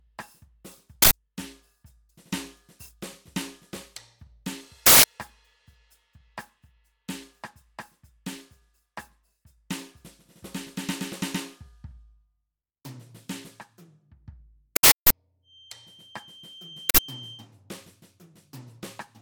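An uninitialised buffer plays leftover memory as loud digital bursts at 1.02–1.11 s, 4.86–5.04 s, 14.76–15.10 s and 16.90–16.98 s. The bursts last 85 to 341 ms, which fits 4096- to 16384-sample blocks.

From 15.42 to 17.49 s, a thin 3.1 kHz whistle that swells and fades slowly sits a little below the music. It is likely a feedback whistle, from a speaker-to-microphone loop held just short of runaway.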